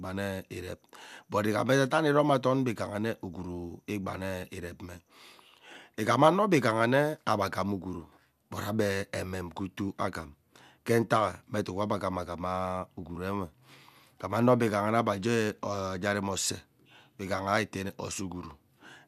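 No technical faults can be heard anywhere in this recording.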